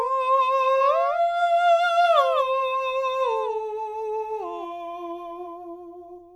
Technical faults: doubled audio track

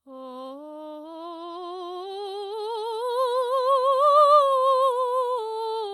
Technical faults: none

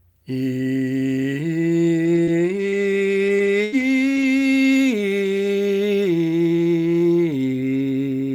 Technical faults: scattered short gaps

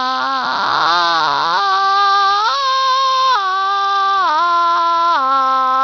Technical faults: Bluetooth SBC compression

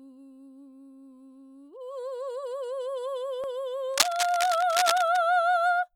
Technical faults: cable scratch noise

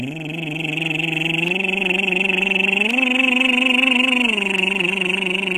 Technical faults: HE-AAC compression; dropped samples

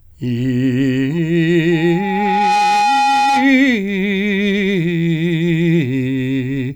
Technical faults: loudspeaker feedback squeal

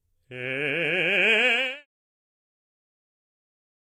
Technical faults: HE-AAC compression

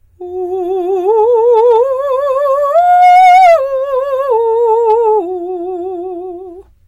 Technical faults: hard clipping

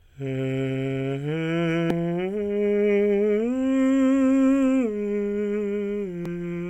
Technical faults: damaged data in a compressed stream

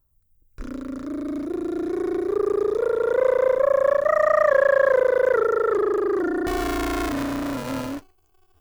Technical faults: buffer tearing

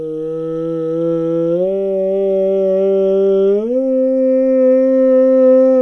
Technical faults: wrong sample rate

